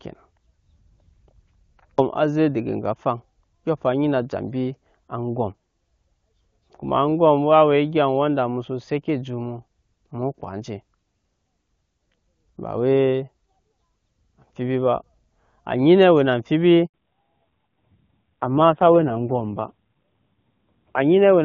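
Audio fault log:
16.86 to 16.94 s, handover gap: the speech cuts out for 80 ms while the call switches networks and no frames arrive. The waveform drops to a flat line and the spectrogram shows a narrow blank vertical strip right across every frequency band.
16.94 to 21.45 s, fallback to narrowband: after the gap, the call moves from HD Voice at 23.85 kbit/s to a narrowband codec at a rate that fits 5.9 kbit/s. Nothing remains above 4 kHz, so the speech turns dull and raspy. The spectrogram shows a sharp horizontal ceiling at 4 kHz.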